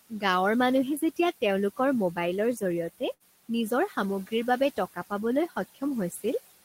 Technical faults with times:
0.00-6.64 noise suppressor artifacts
3.13-3.23 burst of packet loss

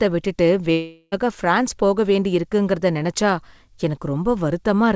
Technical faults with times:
0.72-1.14 long network dropout

